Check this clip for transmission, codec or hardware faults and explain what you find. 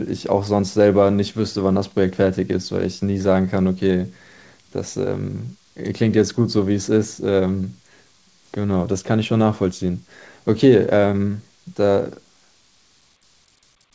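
I found no transmission, codec or hardware faults in this speech clip.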